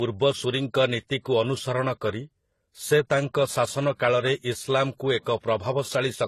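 Throughout the speech, the sound carries two layers of compression damage at once. Nothing reaches above 12.3 kHz, and the artefacts of the different codecs are heard together. That combination is most likely transcoding between lossy codecs: a very low-rate first encode, consistent with something like HE-AAC at 16 kbit/s, re-encoded by a higher-rate AAC-LC stage that spent its bits preserving the earlier artefacts. A single low-bitrate encode would show only one artefact character, not two overlaid.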